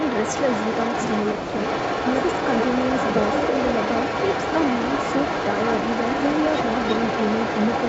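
From the very start to the end, a second copy of the speech trails the original by about 0.33 s, only a few decibels quieter. This is an echo leak, likely from a loudspeaker on the far end whose echo canceller let its own microphone pickup slip back into the call.

Between 1.38 and 1.54 s the speech abruptly sinks, by roughly 20 dB at its deepest, for a little over a tenth of a second before recovering. This is speech suppressed in double talk: with both sides sounding at once, the echo canceller likely mistook the talker for echo and turned it down along with the leak.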